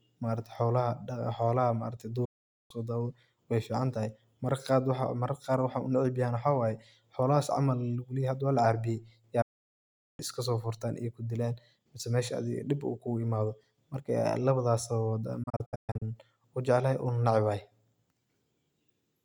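Digital broadcast dropouts at 2.25 to 2.71 s, 9.42 to 10.20 s and 15.43 to 16.02 s. The receiver lost good frames and muted, fading to silence within 8 ms and discarding that speech. The last is several short holes, the longest 128 ms.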